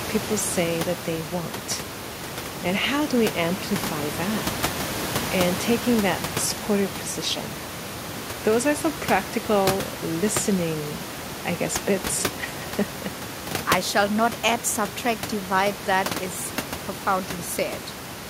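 No technical faults are present in the system's handling of this speech. Room noise from the microphone's surroundings sits about 10 dB below the speech and belongs to the recording itself.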